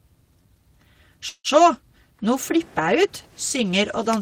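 Packets were likely delayed and the jitter buffer emptied, causing a call audio freeze from 1.29 to 1.47 s: a fading buzz or hiss, brief silence, then the speech resumes intact.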